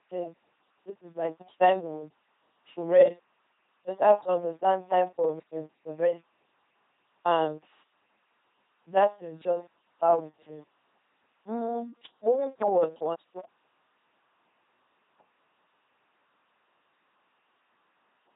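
From the start, the speech has a buzzing, mechanical robot quality with nothing above 3.8 kHz. This is heavy LPC-10 vocoder damage, which fits a 2.4 kbit/s LPC-10 vocoder.

Jumbled moments occur at 1.4–1.8 s (after "this is my", before "to to rest"), at 5.4–6.2 s (after "to understand time for"), and at 13.0–13.4 s (after "moving forward"). These are chunks out of order: 200 ms blocks play late by one chunk, or by three at 5.4 s.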